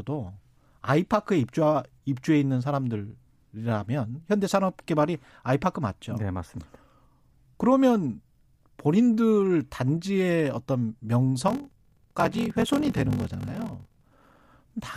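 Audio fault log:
11.46–14.45 s, block size mismatch (padded): the speech picks up a steady 43.1 Hz buzz and slows to 0.861 times normal speed at roughly its usual pitch, since each short written block gets zero-padded out to a longer read, which fits a 1024-sample read block.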